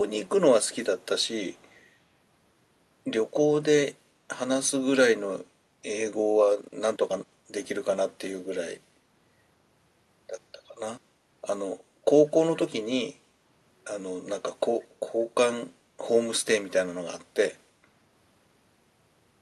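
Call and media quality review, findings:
Echo leak, 0.66–0.71 s, 1.02–1.06 s, 1.23–1.28 s, 1.52–1.83 s: faint delayed repeats trailing speech by about 179 ms, first about 30 dB down, rest near 40 dB. Likely far-end echo canceller residual. Spectrogram: weak ghost copies of preceding harmonics, offset ~0.18 s, content above 12 kHz absent, consistent with Opus call path.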